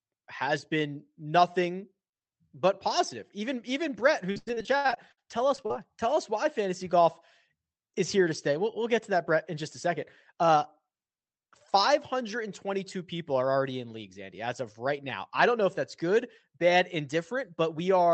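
From 4.31 to 5.73 s the speech turns choppy and robotic, with holes up to 90 ms. This is repeated packet loss: about a third of the stretch is patched by extending the last sound. From 9.88 to 10.93 s, just after "in just a", the speech sounds hurried, running 6% faster at unchanged pitch. This is a jitter buffer speed-up, which trimmed roughly 70 ms of short pitch-period pieces to cut the delay.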